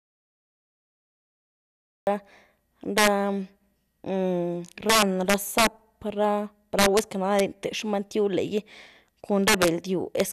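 From the start until 2.07 s there is an audio dropout to silence: the waveform is a flat line and the spectrogram is blank, with no room tone, likely from lost input. Throughout the speech, integer overflow wraps peaks driven about 7 dB past full scale to the opposite sign, affecting around one percent of samples. These show as tall vertical spikes and broadband streaks, heard as violent cracks.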